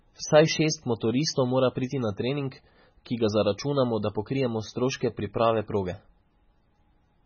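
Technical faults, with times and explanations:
Throughout, MP3 compression: heavy, watery swirl and nothing above 6.6 kHz, likely a starved encoder at about 16 kbps chopping treble and dropping weak bands.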